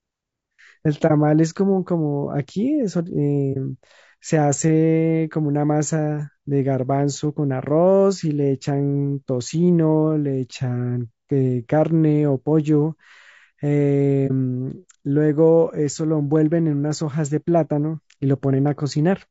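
Throughout the speech, the encoding most likely used low-delay AAC compression (AAC-ELD) at a low bitrate, around 32 kbps. Its short frames capture the voice's harmonics poorly, so the speech sounds plainly rough and grainy, with noise between harmonics and a thin, synthetic-sounding top band.

At 1.07–1.11 s, 3.53–3.57 s and 14.27–14.31 s, AAC frame loss with muting occurs. Each time the decoder zeroed the missing spectrum, consistent with a single lost frame of about 30 ms. The overlapping windows fade the sound out and back in, leaving a brief soft-edged gap.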